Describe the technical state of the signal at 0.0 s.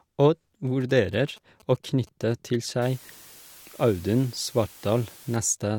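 At 0.0 s the speech signal is intact, with no technical fault present at that moment.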